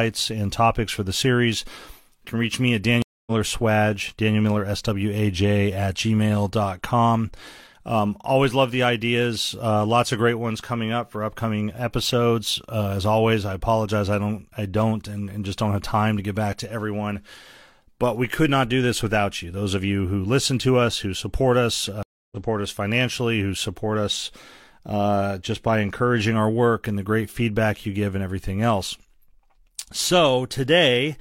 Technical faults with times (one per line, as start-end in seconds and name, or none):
3.02-3.32 stream reconnect
22.03-22.37 stream reconnect